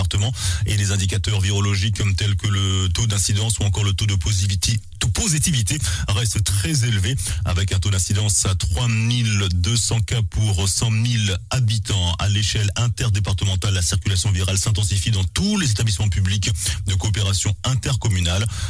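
No technical faults can be heard anywhere in the recording; the signal holds steady without interruption or damage at any point.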